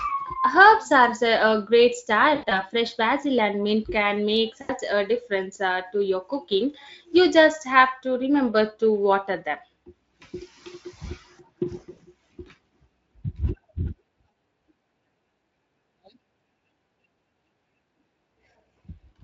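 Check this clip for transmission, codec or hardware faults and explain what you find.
The audio has one transmission fault, VoIP packet loss concealed by the speech codec, occurring four times: 2.35 to 2.62 s, 4.61 to 4.71 s, 11.91 to 11.99 s, and 14.31 to 14.33 s. The first gap loses about 100 ms scattered over 160 ms, with the longest unbroken run about 80 ms. The others lose about 80 ms, 60 ms and 20 ms. When packets fail to arrive, the decoder keeps repeating its last pitch and spectral shape at falling gain, so the missing stretch becomes a smeared, buzzy tone or coloured noise that fades out. Because each decoded frame depends on the one before, the sound stays thin or distorted for tens of milliseconds or more after real packets resume. The speech is carried by the Speex codec, whose light coding roughness underlies the whole clip.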